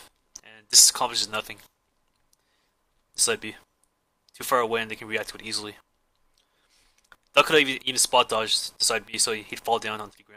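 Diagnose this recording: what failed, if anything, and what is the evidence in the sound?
Nothing in the signal chain failed, since no stage of capture, conversion, processing, transmission or playback leaves any audible sign of a fault in this recording.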